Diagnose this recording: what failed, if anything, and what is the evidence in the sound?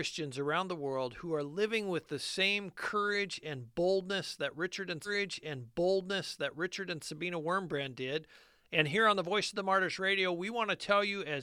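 A stream segment repeated at the playback stage: from 5.04 s to 7.04 s, two seconds of speech play again, with a small blip at the jump back. The player queued the same segment twice. On a waveform and spectrogram, that two-second block appears duplicated, with a discontinuity at the splice.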